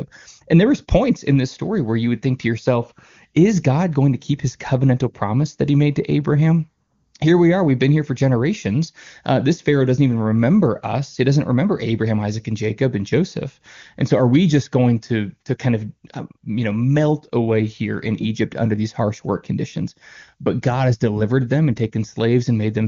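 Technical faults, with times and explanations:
No technical faults can be heard in this clip. It comes through an AMR wideband (HD Voice) codec, with the upper band above 6.4 kHz filled in with shaped noise up to about 7 kHz, and any coding trace is faint at most, which fits the codec's highest rate of 23.85 kbit/s.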